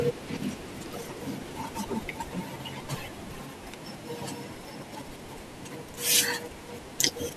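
From start to finish the speech runs at about 1.45 times normal speed and sits about 6.45 semitones high, the hurried, chipmunk-like signature of a wrong sample rate. The samples are read out faster than they were captured, with no conversion, which fits audio recorded at 22 kHz being played at 32 kHz. On a spectrogram, harmonics and formants sit higher and wider apart. On the waveform, syllables and pauses look squeezed to about two-thirds of their natural length.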